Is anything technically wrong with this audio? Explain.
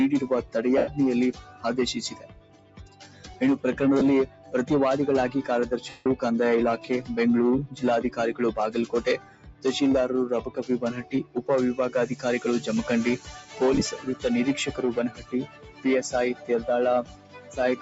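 Yes. A speech-oriented noise suppressor is treating this audio as noise, and there are also Bluetooth LE Audio dropouts.

The noise suppressor applied to music or sounds is active for the whole clip. It mistakes steady tones, ambience and decay tails for background noise and pulls them down, while sharp onsets slip through. Across the recording the gain swings by roughly 15 dB, so the sound pumps and thins instead of holding a stable level.

In several places the suppressor cuts the sound harder than elsewhere: 0.42 to 3.41 s, 4.26 to 4.54 s, 7.67 to 8.18 s, 9.17 to 9.65 s, 10.44 to 11.42 s, 13.18 to 14.24 s, 15.09 to 16.5 s, and from 17.03 s to the end. The drops reach about 12 to 16 dB. Sustained and fading material sinks or has its tail chopped short, while attacks stay comparatively intact.

Lost LE Audio frames occur at 0.78 to 0.88 s (about 98 ms), 3.99 to 4.01 s (about 23 ms), 5.89 to 6.06 s (165 ms), and 13.74 to 13.82 s, where short gaps totalling about 38 ms, the longest around 15 ms, are scattered over 75 ms. 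The LC3 decoder covers each gap by repeating the last spectrum with randomised phase, so tonal content smears into noise. The longer gaps fade toward silence. The gap lengths fit 7.5 ms frames.

The call microphone processing is working as expected. It trims the deepest bass, and nothing is heard above 8 kHz.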